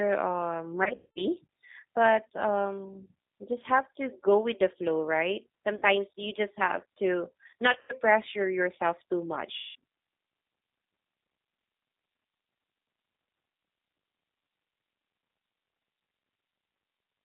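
G.729 codec damage runs throughout. The 8 kbit/s coder rebuilds speech from a filter, pitch and sparse pulses, sounding rough and synthetic within 150 Hz to 3.7 kHz.

VoIP packet loss concealed by the speech codec occurs at 0.84–1.23 s, 5.76–5.83 s, 7.73–7.93 s and 9.57–9.75 s. In each gap the decoder stretches its last frame into a fading buzz or coloured noise, and the speech stays weak afterwards.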